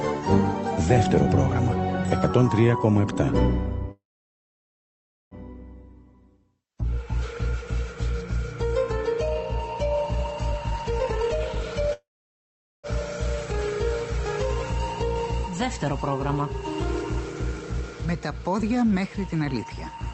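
Call audio freeze at 3.91 to 5.34 s: the audio stops, the last sound trails on briefly as a fading buzz, then about 1.32 s of silence follows before it resumes where it left off. The likely cause is delayed packets draining the jitter buffer, which adds a 1.4 s gap with nothing lost.

Jitter buffer speed-up at 10.52 to 11.92 s: with surplus audio queued, the receiver repeatedly cuts pitch-period-sized slices, playing 135% fast at unchanged pitch. Roughly half a second is removed, so the passage sounds hurried.

Call audio freeze at 11.93 to 12.87 s: the same stall recurs right after, with a short fading tail and then about 0.81 s of silence, adding a 0.9 s gap before the audio continues intact.

Jitter buffer speed-up at 17.78 to 19.97 s: a gentler trim at 104% speed removes roughly a tenth of a second. The pitch holds, and the slight rush is hard to notice.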